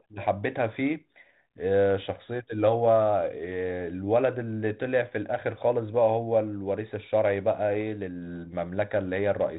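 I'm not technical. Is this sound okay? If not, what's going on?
Yes, this sound is okay; nothing is going wrong in it.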